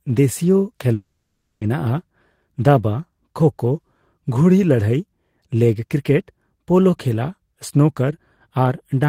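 From 0.93 s to 1.63 s the speech breaks off, and the last sound is stretched into a buzzy, fading tone for about 0.68 s, followed by a brief gap of about 20 ms before the speech resumes with a chunk missing. A long network dropout is the likely cause: the receiver synthesised filler while no audio arrived. On a spectrogram, smeared, repeating harmonics dim away. The waveform shows a decaying envelope and then a flat sliver.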